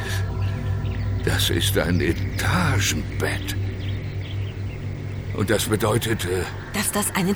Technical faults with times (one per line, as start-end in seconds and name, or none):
none